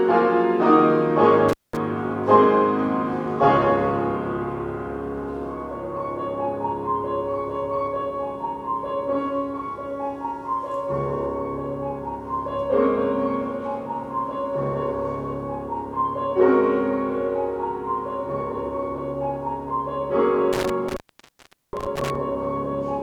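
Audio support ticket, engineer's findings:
Intermittent contact at 1.49–1.77 s (about 0.20 s open) and 20.53–22.15 s (about 0.76 s open). Sound drops out with crackle at the edges and faint hiss inside. Probable loose cable/plug opening briefly. Waveform: near-flat gap. Spectrogram: broadband vertical streaks bracketing an emptied band.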